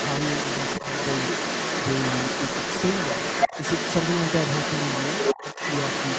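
Speech, with the other side's voice leaking through for the whole clip at about the same level as the talker, likely residual loudspeaker echo the canceller missed; a second overlapping voice, not room reverb of the talker. Between 5.42 and 5.59 s, the talker dips slightly in short patches while both speak, likely speech suppressed in double talk rather than a dropout, since the level drops by only about 5 dB instead of going silent. Nothing reaches above 8 kHz, which fits an Opus call at around 20 kbps.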